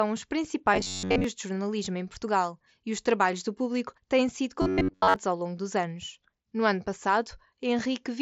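From 0.74 to 1.24 s and again from 4.62 to 5.16 s, robotic sound from repeated short buffers imposes a rigid 93.8 Hz buzz. This is likely caused by roughly 10.7 ms chunks looping while most of the real audio is skipped. On a waveform, identical segments repeat. On a spectrogram, evenly spaced harmonic lines appear about 94 Hz apart. The mSBC headset path adds light grain, with content limited to 8 kHz.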